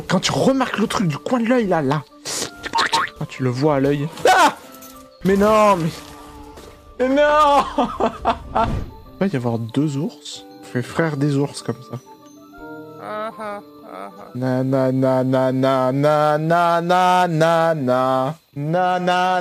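From 14.25 to 18.31 s, crude rate conversion adds a gritty, inharmonic fizz that tracks loud and high content. Samples were repeated without filtering, which points to 44.1 kHz stretched to 48 kHz, leaving error around 30 dB down. Spectrograms show faint stray lines unrelated to harmonics.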